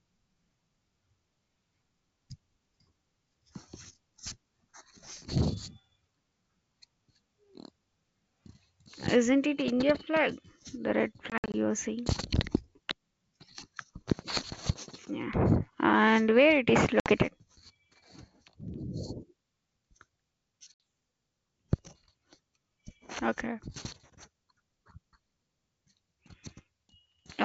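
Packet loss on an ADPCM call at 11.30–11.55 s, 17.00–17.11 s and 20.74–20.80 s cuts hard silent gaps. The desynchronised decoder then returns with a click, distortion or the wrong level.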